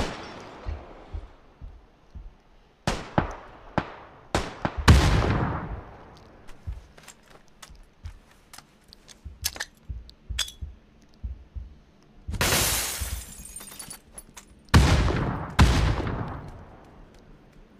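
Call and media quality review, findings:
Doubled audio track, 12.38–13.96 s: sound gains a hard, flat repeat about a tenth of a second behind, roughly equal in level, full-band, no decay or room colour, switching on and off abruptly. Likely a second capture path or edit layering an offset copy.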